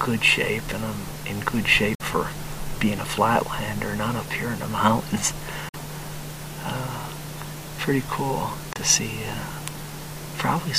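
The sound cuts to silence at 1.95 to 2.01 s, 5.69 to 5.76 s and 8.73 to 8.77 s. This is likely a Bluetooth dropout from late packets. Playback resumes further on, skipping about 46, 46 and 23 ms.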